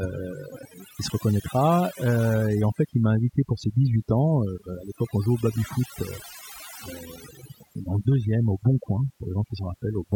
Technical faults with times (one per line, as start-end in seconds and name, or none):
0.00-10.15 overdone noise removal